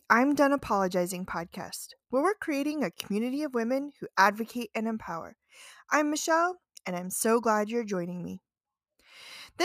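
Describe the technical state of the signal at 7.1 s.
At 7.1 s the signal is intact, with no audible fault in the speech at that moment.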